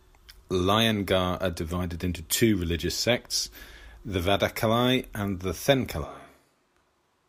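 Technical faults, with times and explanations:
6.06 s to end: switch to a distant microphone. Speech abruptly turns roomy and thin, about 5 dB quieter and noisier, likely because the close microphone dropped out.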